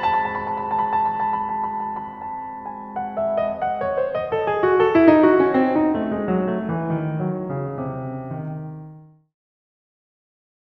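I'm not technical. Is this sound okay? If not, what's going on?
Yes, no faults heard in this music; the level eases down from around 8.5 s to silence at 9.36 s, a deliberate smooth fade-out with no click.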